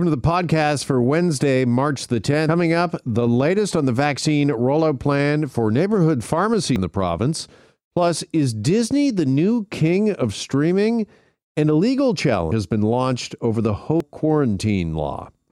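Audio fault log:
2.49, 6.76, 12.52 and 14.00 s: compressed frames skipped. Frames of about 93 ms each never play. The speech jumps ahead roughly 0.3, 0.2, 0.2 and 0.5 s, before "up the latest on", after "rollout plan for neighborhood", and after "been launched over the".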